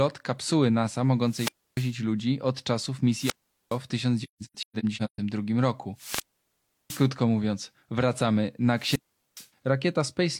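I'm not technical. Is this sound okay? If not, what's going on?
No, there are two different problems in this speech recording.

The main one is a wireless microphone squelch dropout, which happens four times. The radio link from the microphone weakens, and the receiver mutes itself instead of passing on static. Each time you hear hiss rise, then near silence, then the voice returning. This happens at 1.24 to 1.96 s, with about 0.29 s of silence, just before "ludzi od czasów". It happens again at 3.15 to 3.79 s (about 0.42 s silent), at 5.95 to 7.10 s (about 0.70 s, the longest), ending just before "mówiąc wracamy", and at 8.76 to 9.48 s (about 0.41 s), just after "mówiąc wracamy".

The second is AAC frame loss with muting, between 4.23 and 5.19 s. Small chunks of the compressed audio went missing, and the player filled each gap with silence. About 0.6 s of sound is lost in several short holes spread across that stretch, which points to around fourteen missing frames. 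The longest single gap is roughly a sixth of a second. These holes fade in and out softly.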